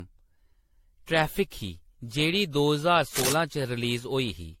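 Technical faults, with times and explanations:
Throughout: generation loss. Swirly, hollow, smeared speech with blurred attacks, likely from about seven AAC re-encodes near 64 kbit/s. The spectrogram shows patchy holes and nothing above 16.5 kHz.
3.14–3.33 s: cable scratch noise. A burst of scratching about as loud as the speech, likely from a worn connector whose contact shifted. It shows as dense broadband smears and jagged waveform spikes.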